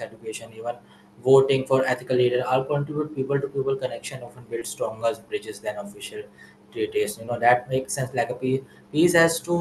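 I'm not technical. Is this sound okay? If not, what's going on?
No. There are two tiny hiccups in the speech, one at 4.59 to 4.63 s and another at 7.25 to 7.29 s. Each sounds like a quick smear or wobble. This is short concealed packet loss. On a call, sound travels in small pieces, and here about 20 ms of audio arrived too late each time. The receiving end covered each gap by stretching the sound just before it, then blended back in.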